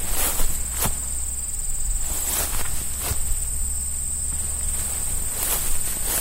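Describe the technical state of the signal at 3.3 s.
At 3.3 s the signal is intact, with no dropout, distortion, clicks or other technical fault at that moment.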